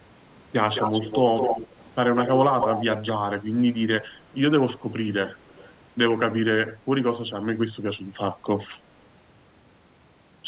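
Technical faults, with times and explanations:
0.75–1.19 s, 1.36–1.67 s, 2.19–2.42 s, 2.6–3.12 s, echo leak: a copy of the speech trails 213 ms behind, nearly as loud as the original (quieter at 2.19 s), likely a speakerphone's echo canceller letting it through.
5.49–5.73 s, echo leak: a much fainter copy, around 247 ms late and about 30 dB down, likely the same canceller missing a small residue.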